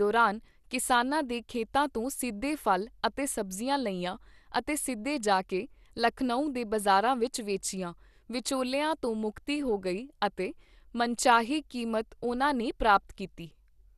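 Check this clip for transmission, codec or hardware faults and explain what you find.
One fault runs through the whole speech clip: MP2 compression, plainly audible. Nothing remains above 12.2 kHz, and the surviving sub-bands sound coarsely quantised, dull and gurgling. The likely cause is MPEG Layer II starved of bits, fitting about 80 kbps. Unlike a plain low-pass filter, the flickering bands and granular texture mark it as codec damage.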